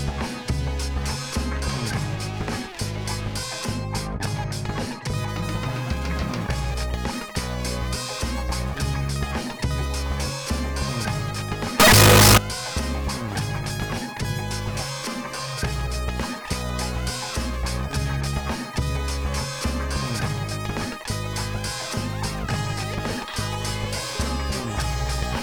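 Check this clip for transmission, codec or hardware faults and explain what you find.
One fault is present: a float read as integer burst from 11.80 to 12.38 s. For just over half a second the sound jumps to a very loud, harsh, nearly square waveform sitting at an almost fixed, high level, with background noise as loud as the main sound, while pitch stays traceable. This likely comes from 32-bit float samples being interpreted as 32-bit integers, so sign and exponent bits set the level. Unlike ordinary clipping, quiet passages become just as loud as peaks.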